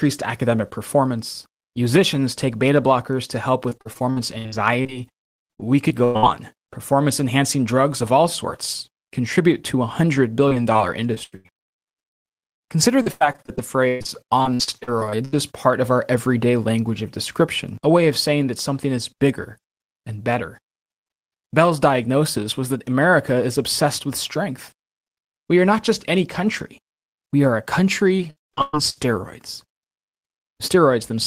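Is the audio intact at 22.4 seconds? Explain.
Yes, the speech at 22.4 seconds is intact, with no audible fault at that moment.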